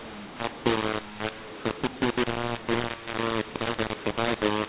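Throughout, the speech has a mu-law and A-law mix-up. A-law samples are decoded as mu-law, scrambling levels so the sound turns harsh and gritty and pauses fill with noise. The waveform shows a raised floor between phrases, and the spectrogram shows grit smeared up to the 4 kHz ceiling.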